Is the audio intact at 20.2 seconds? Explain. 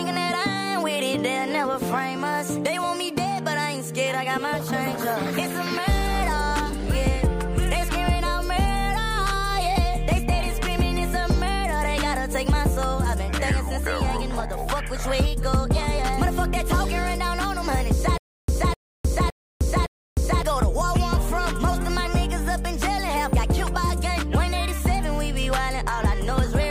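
No. At 20.2 seconds the sound is caught in a stutter with silent gaps running from 18.18 to 20.42 s: a 255 ms fragment returns four times at an even 562 ms pace, each time followed by about 307 ms of dead digital silence. The likely cause is a stalled player or stream that replayed its last buffered fragment on each retry and then ran empty, so the audio belonging to that stretch is missing.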